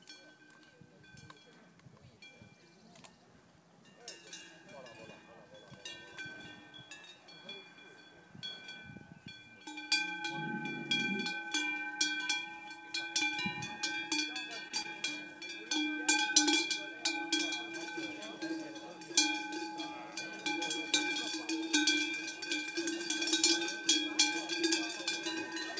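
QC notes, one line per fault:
14.68 to 14.72 s, short stall from a late packet: a packet arrived behind schedule and the jitter buffer ran dry, so the receiver held the last sound for about 19 ms and then resumed at the same point, pushing playback about 19 ms later. Nothing is lost, but the sound hangs briefly with a faint buzz or dip.
14.82 to 14.86 s, short concealed packet loss: about 20 ms of audio never reached the decoder, and the receiver bridged the gap by extending the preceding sound for about 22 ms before blending back into the real signal. The result is a quick smear or wobble, and a brief sound may drop out.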